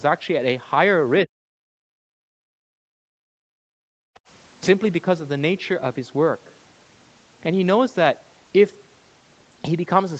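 At 1.25 s, and again from 1.59 to 3.59 s, the speech sinks by roughly 40 dB, first in a brief dip of about a tenth of a second and then for a sustained two seconds. This is speech suppressed in double talk, likely from the echo canceller ducking the near talker while the far side spoke at the same time. What distinguishes it from gating is that the talker's own speech is cut while they are mid-utterance.

From 3.87 to 4.24 s, the background is gated by the echo canceller: the room sound falls by about 40 dB for roughly 0.3 s and comes back once the canceller releases. Unlike the double-talk dips, this affects the ambient floor rather than the speech. The audio is band-limited to 8 kHz throughout, as expected from the Opus call path at around 20 kbps.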